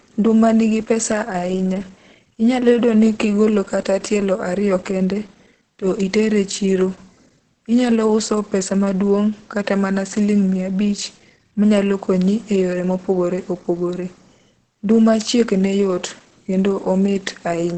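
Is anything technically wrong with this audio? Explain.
Yes. Throughout the speech there is heavy damage that likely comes from Opus compression in its speech mode, with nothing above 8.5 kHz, consistent with a low bitrate near 12 kbps, leaving the sound muffled and hoarse.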